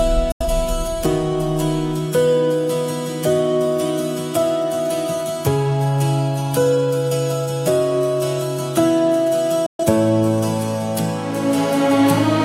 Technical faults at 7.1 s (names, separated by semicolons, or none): none